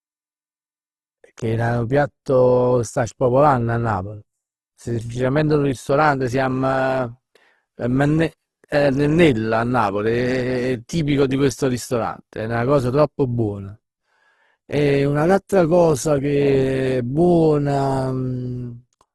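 Throughout the speech, nothing reaches above about 12.1 kHz, and the sound is plainly grainy and rough, with noisy band-filling in place of clean detail. This is likely Opus compression in its CELT music mode, consistent with a low bitrate near 16 kbps.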